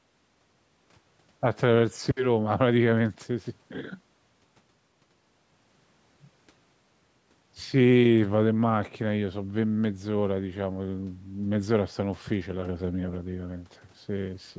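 No technical faults can be heard anywhere in the speech. It has been through a call's microphone processing, which trims away the lowest bass and leaves nothing above 8 kHz, as that path normally does.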